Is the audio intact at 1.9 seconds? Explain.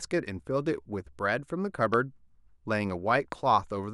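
No, there's a single loud pop at 1.94 to 1.96 s, some 15 dB over the speech, most likely a voltage spike from a switch or static.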